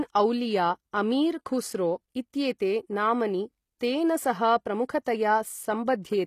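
From start to finish the treble has a synthetic, gritty sheen: s sounds come out lispy and metallic, and the upper harmonics do not sit naturally with the lower ones, while nothing is heard above about 14.9 kHz. This is likely HE-AAC compression, where only the lower spectrum is truly coded and the highs are rebuilt by copying lower bands upward under a coarse envelope. The damage is plainly audible, which fits a low bitrate around 24 kbps.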